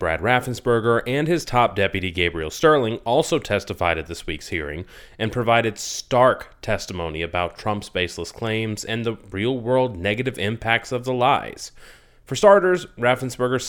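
Nothing in the speech recording points to a technical fault at any point, with the signal holding steady throughout.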